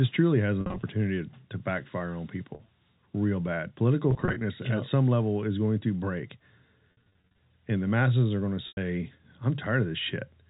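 Packet loss with pitch repetition breaks the speech at 0.61–0.83 s after "truly has", 2.55–2.71 s, 4.11–4.41 s, 6.92–7.38 s and 8.68–8.77 s. In the first four, short scattered losses, 50 ms at most, were bridged by repeating the last pitch period, so each sounds like a brief buzzy hold; the last, 90 ms lost almost unbroken, fades into silence before the speech returns. A spectrogram shows frozen, flat harmonic stripes, and the waveform shows identical repeating cycles.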